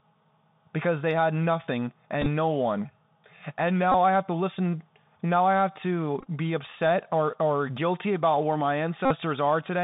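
From the start the whole clip runs through a Bluetooth CVSD headset codec, and you can plainly hear it. The band is squeezed to roughly 150 Hz to 3.7 kHz, so there's no air on top. The sound fits a 64 kbps CVSD link, where a one-bit up/down tracker with an adapting step can't keep pace with loud, bright moments. Sibilants come out scratchy and there's a grainy hiss sitting under the speech.

Then come the Bluetooth headset packet repeats, where lost packets get replaced by re-decoding the previous one. At 2.22 to 2.27 s, between "because they had nothing" and "no one", about 26 ms goes missing, scattered over 45 ms with runs up to about 10 ms. It's a brief rough buzz. At 3.92 to 3.94 s about 22 ms is lost, a short buzz. At 6.21 to 6.27 s, after "I have to" and before "be upset or or", about 41 ms is lost across 60 ms with runs of around 15 ms, long enough to hear the 3.75 ms repeat as a buzz near 267 Hz. 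The worst is at 9.05 to 9.12 s, just after "guilty about where my", where about 52 ms is replaced.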